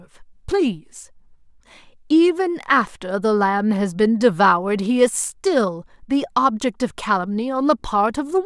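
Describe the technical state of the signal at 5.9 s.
At 5.9 s the speech signal is intact, with no dropout, distortion or other fault to be heard there.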